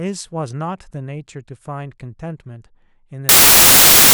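Samples built from the wrong bytes, from 3.29 s to the end at 4.14 s: misassembled byte order promotes the noisy low bits, so the speech becomes loud, harsh broadband noise.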